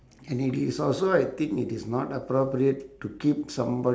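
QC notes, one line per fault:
No faults found in this speech recording.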